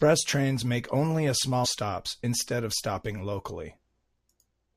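At 1.64 to 1.66 s, right after "trains make only a" and before "stops instead of stopping", there is a brief burst of damaged data in the compressed stream. Some bytes in the coded speech were corrupted, so the decoder could not read those frames correctly. It lost synchronisation and had to find the next valid frame header. The result is a short glitch, about 20 ms long, that cuts into the speech at that point.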